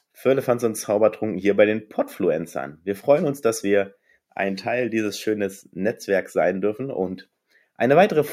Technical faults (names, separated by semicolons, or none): none